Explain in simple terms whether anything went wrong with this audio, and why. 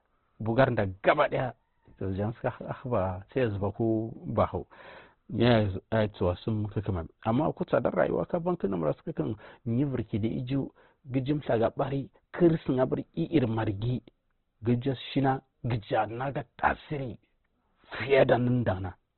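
Something did go wrong, and it lasts the whole clip. The speech sounds muffled, as if heard through a thin wall. Nothing comes through above about 4.2 kHz, so the crisp top of the sound is gone. The sound is also rough and grainy. This is likely Opus compression squeezed very hard. When it has too little room, it narrows the sound and fills the gaps with noisy texture instead of the real detail.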